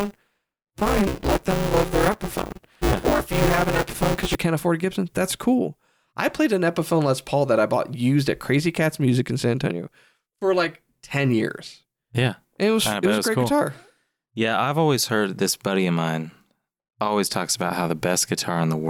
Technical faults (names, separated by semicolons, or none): buffer tearing